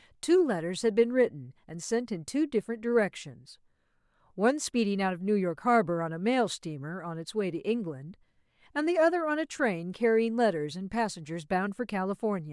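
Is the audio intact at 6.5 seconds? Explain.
Yes, the audio is intact at 6.5 seconds, with the speech there free of any audible fault.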